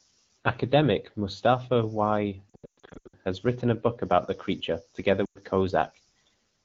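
Speech coded as AMR wideband, clear at about 12.65 kbit/s, suffers lost AMR speech frames from 2.50 to 3.15 s, scattered bursts with runs up to 120 ms, and again at 5.25 to 5.39 s. Unlike hard dropouts, the decoder reuses the last pitch with falling gain, dropping to near silence within two frames, then recovers roughly.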